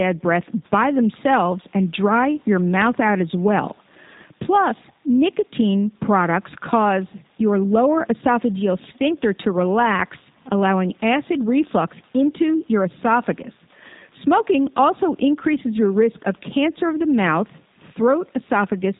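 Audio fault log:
throughout G.729 codec: speech rebuilt from a vocal tract filter and sparse pulses, fitting an 8 kbit/s coder, cuts everything above 4 kHz, sounding muffled, rough and synthetic.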